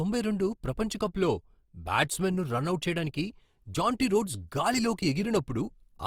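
Throughout the clip, the speech has likely passed through Opus compression in its music (CELT) mode at a low rate, something near 24 kbps. With too few bits to code each band in detail, the encoder keeps every band's overall level and fills much of the fine structure with folded copies of lower bands or with noise. The damage is plainly audible as grainy, rough, noisy texture in the voice, while the bandwidth still reaches about 20.3 kHz.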